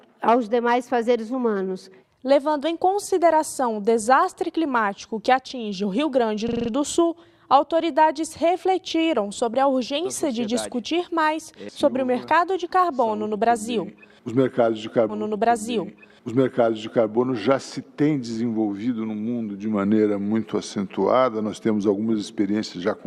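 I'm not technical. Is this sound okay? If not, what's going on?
No. At 6.49 to 6.70 s there is a system hang loop: the computer briefly froze while the sound hardware kept replaying the same tiny 43 ms slice five times, making a rapid machine-gun stutter at about 23 repeats per second. That fits a 2048-sample buffer.

From 15.09 to 17.09 s there is a stream segment repeated: the player fetched the same stretch twice, so two full seconds play again after a small blip at the jump back. Unlike the stutter, the repeat is long and happens once.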